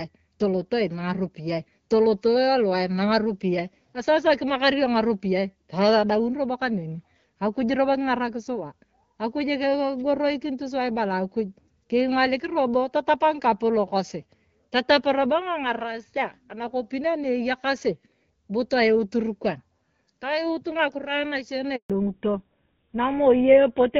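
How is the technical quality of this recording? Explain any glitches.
Two faults sit near the end of the speech, with the HD Voice (AMR-WB) coding ahead of them showing only light codec damage, consistent with around 12.65 kbit/s.

At 21.76 s there is a handover gap. The call switched networks and no speech frames arrived for 140 ms, so the voice dies away within a few tens of milliseconds and is silent until 21.90 s.

From 21.90 s to the end is a fallback to narrowband. The call dropped to an older codec, likely GSM full rate. Everything above 4 kHz disappears, leaving the speech duller and rougher.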